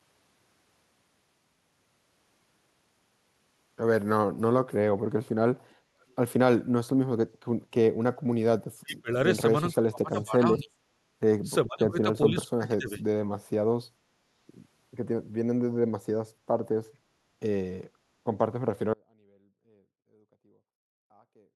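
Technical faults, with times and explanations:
5.70 to 5.75 s and 6.01 to 6.14 s, echo leak: two brief, faint scraps of a delayed copy of the speech, about 40 dB below the talker, arriving 426 ms after the original. The likely cause is a far-end loudspeaker whose echo canceller let part of its microphone pickup through and send it back. On a spectrogram these appear as weak, smeared duplicates of earlier speech patterns, offset in time. On the waveform they are barely visible.
8.81 to 9.10 s, 9.72 to 10.71 s, 11.66 to 12.07 s and 12.23 to 13.00 s, speech suppressed in double talk: the speech dips and breaks up in pieces, falling by roughly 20 to 35 dB at its deepest. This likely happened because both ends talked at once and the echo canceller, unable to separate its talker from the echo, attenuated everything. The waveform shows sudden notches in the envelope. The spectrogram shows the speech energy fading in patches.
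18.94 s to the end, audio dropout to a faint residue: the speech cuts off abruptly mid-flow and does not return. Only a faint sound remains, roughly 35 dB down. The likely cause is that the wanted signal was lost while the path after the break stayed live. On the waveform the amplitude collapses to a thin line at a sharp edge, unlike a fade. The spectrogram goes nearly blank, keeping only a dim wash.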